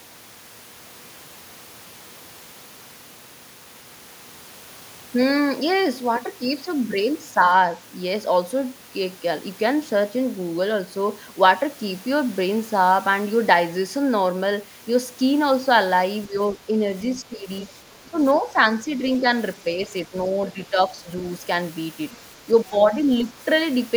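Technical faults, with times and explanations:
16.27 to 16.75 s, 17.16 to 19.26 s, 19.63 to 21.09 s and 22.46 to 23.38 s, speech suppressed in double talk. The speech dips by about 10 dB in short patches, totalling about 0.3 to 1 s per span. The likely cause is an echo canceller mistaking overlapping talk for echo and turning both down.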